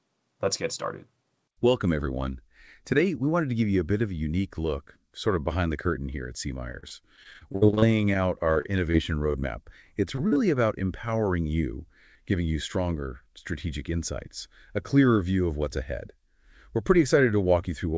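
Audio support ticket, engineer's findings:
Repeated packet loss (robotic sound), 6.72–8.96 s and 9.32–10.38 s. Choppy, robotic stretches. Some twenty holes in the first, seven in the second, longest 56 ms. Receiver concealment repeats the last sound over each gap. About 18% and 15% of each span patched.

Jitter buffer speed-up, 13.34–13.94 s. Audio runs about 5% fast, pitch unchanged, slightly hurried. Receiver drained excess buffered audio by cutting short pitch-period pieces, a few tens of ms in total. Band limit at 8 kHz fits the G.722 call codec.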